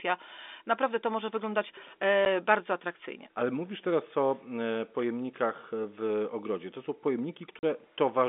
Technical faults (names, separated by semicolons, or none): packet loss filled with silence